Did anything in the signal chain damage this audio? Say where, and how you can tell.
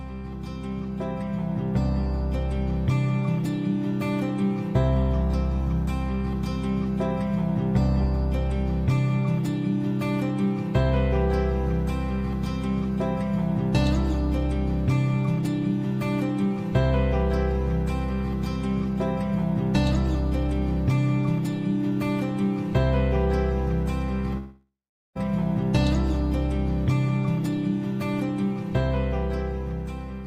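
Yes, at the network stage: a long network dropout from 24.37 s to 25.17 s. At 24.37 s the last sound is stretched into a buzzy, fading tail, then about 0.42 s of silence follows before audio resumes at 25.17 s, with roughly 0.78 s of material simply gone. This is likely a burst of lost packets. The receiver's concealment repeated and faded the final good frames, gave up when nothing arrived, and resumed playback at the current point without recovering the gap.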